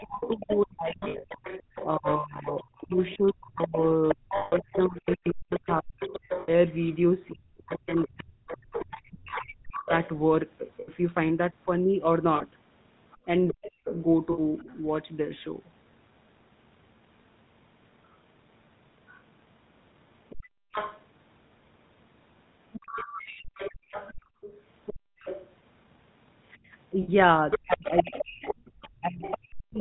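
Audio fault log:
Throughout: GSM full-rate codec at about 13 kbps, plainly audible as a buzzy, gravelly roughness, with nothing passed above 4 kHz because the vocal tract model is driven by sparse regular pulses.
0.0 to 9.92 s, 13.51 to 13.88 s and 27.63 to 29.78 s: speech suppressed in double talk, with the talker dipping by up to roughly 40 dB in pieces, likely the echo canceller ducking both voices while the far side talked.
0.23 to 10.1 s, 13.11 to 14.74 s and 19.08 s to the end: other side's voice leaking through, a second voice around 10 dB below the talker, likely loudspeaker echo the canceller left in the microphone signal.
1.0 to 1.25 s, 4.36 to 4.53 s, 6.4 to 6.52 s, 10.8 to 10.9 s, 12.36 to 12.42 s, 14.32 to 14.4 s and 27.02 to 27.09 s: lost GSM frames, 40 to 160 ms gaps filled by repeating the last good frame, heard as a brief metallic ring.
20.41 to 25.17 s and 28.61 to 28.65 s: background gated by the echo canceller, with room sound dropping by up to about 36 dB, then about 16 dB, while the loudspeaker played.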